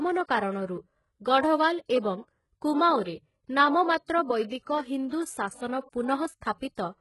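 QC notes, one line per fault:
throughout, HE-AAC compression: s sounds come out gritty and metallic, the top is pasted-on treble that stops near 11.5 kHz, likely from a heavily squeezed bitrate around 12 kbps.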